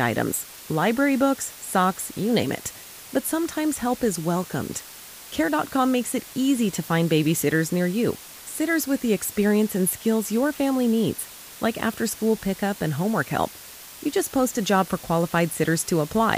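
Low bit depth with dither runs throughout: the speech is rounded to very few levels, which fits 6-bit quantisation, leaving a steady, even hiss roughly 20 dB below it.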